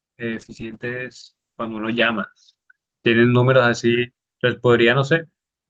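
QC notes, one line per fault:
0.34–5.57 s, call bitrate drop: the speech turns coarse and watery as the encoder gets fewer bits, which fits a fall from about 32 to 8 kbps. The top band shrinks from 12 kHz to 8 kHz and is worst for 1.57 s. Unlike packet loss, nothing drops out, and the dulling recovers.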